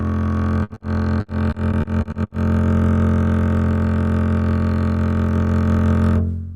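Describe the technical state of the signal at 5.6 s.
At 5.6 s the music plays through intact, with no fault in the signal at that moment.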